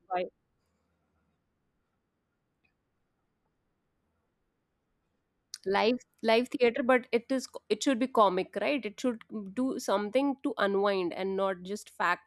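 No technical faults are audible anywhere in this speech recording.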